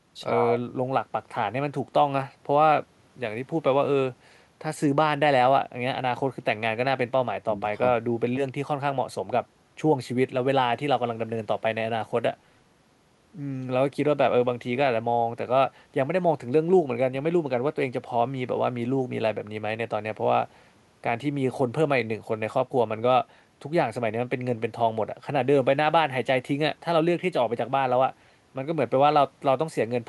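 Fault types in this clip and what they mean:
Nothing stood out on listening; the speech comes through without any audible technical problem.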